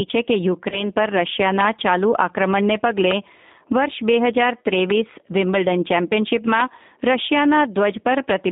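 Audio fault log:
throughout: G.729 codec, speech rebuilt at 8 kbit/s from a vocal tract filter and sparse pulses, band limited to about 200 Hz to 3.7 kHz, plainly rough and synthetic.
0.70 to 0.88 s: VoIP packet loss concealed by the speech codec, about 20 ms lost; the decoder stretched its last pitch and filter into a fading buzzy tone or coloured noise, recovering only gradually.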